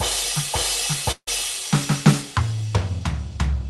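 At 1.11 s the music breaks off. What follows is a fading buzz, about 155 ms long, that smears the last sound before it dies away. Then comes a short stretch of near silence. The music returns at 1.29 s, but it resumes further on, with roughly 160 ms of it simply gone. This is most likely a long network dropout, where the receiver filled the gap and then gave up. The call path adds its coding noise throughout, with highs cut near 12 kHz, consistent with Opus.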